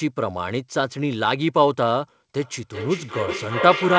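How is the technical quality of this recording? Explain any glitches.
The recording has one clear fault, a feedback echo between two devices, running from 2.41 s to the end of the clip at 3.98 s. Each syllable returns roughly every 400 ms, thinner and more ringing, and the repeats build up instead of fading, reaching about -1 dB relative to the direct speech. A second device in the room is replaying the call, and the first microphone is picking it up again. Neither echo canceller can remove sound it didn't play itself. The audio also passed through a call codec; with nothing above 8 kHz, the band limit fits wideband G.722.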